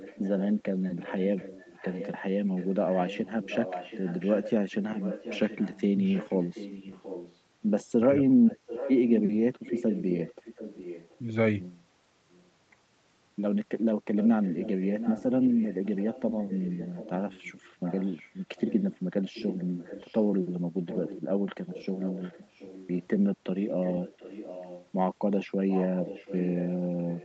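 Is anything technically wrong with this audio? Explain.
Yes. Echo leak runs through most of the speech at 0.0–7.39 s, 8.47–11.18 s, 12.31–12.50 s, 14.16–20.23 s, 20.87–23.09 s, 23.68–24.89 s and 25.69 s to the end. A second copy of the voice trails the original by about 0.73 s. It is about 10 dB down in the first two stretches, barely audible at 12.3 s, and roughly 15 dB down afterwards. The likely cause is a far-end loudspeaker whose echo canceller let its own microphone pickup return down the line.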